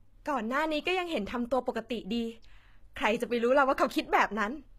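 Right through the speech there's plainly audible codec damage, likely HE-AAC compression at a low bitrate around 20 kbps. The treble is rebuilt from copied lower bands, so it sounds bright but synthetic, with s sounds coming out gritty and lispy.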